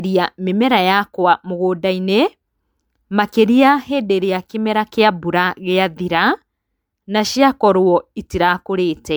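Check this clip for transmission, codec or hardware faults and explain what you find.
There's one codec fault here, and it runs through the whole speech clip: generation loss. The top end still reaches about 20.1 kHz, but the sound is swirly and hollow, with smeared consonant attacks, more damage than a single MP3 pass at around 128 kbit/s would cause. That points to audio that was likely decoded and re-encoded roughly seven times. Each pass quantised it on a shifted frame grid, so the noise and spectral gaps piled up.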